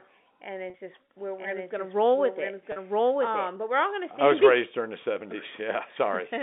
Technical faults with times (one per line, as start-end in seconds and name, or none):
0.70-0.74 packet loss with pitch repetition
1.38-3.48 doubled audio track
2.72-2.76 packet loss with pitch repetition